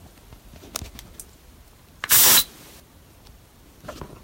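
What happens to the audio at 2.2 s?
Hard clipping runs from 2.04 to 2.41 s. The sound is overdriven by about 15 dB, so its peaks are sliced flat and come out as harsh fuzz.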